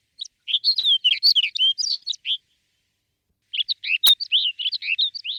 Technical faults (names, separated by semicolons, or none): repeated packet loss (robotic sound); short concealed packet loss; integer overflow